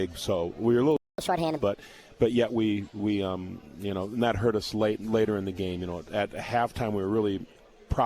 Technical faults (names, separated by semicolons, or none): playback stall; catch-up at higher speed